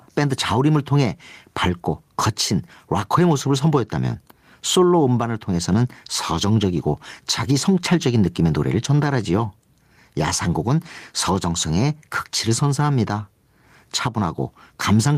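Gain pumping runs throughout. The background swells in pauses and ducks under loud sounds, roughly 10 dB. Likely cause: excessive gain feeding a fast limiter.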